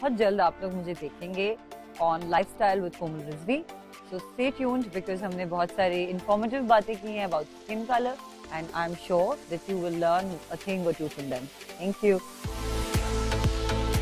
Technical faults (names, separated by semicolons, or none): none